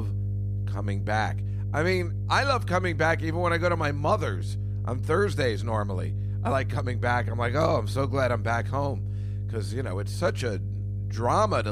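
Speech runs over mains hum at 50 Hz for the whole recording, roughly as loud as the voice itself, the likely result of a ground loop or nearby transformer. A spectrogram shows an unbroken horizontal line at 50 Hz with fainter low harmonics above it.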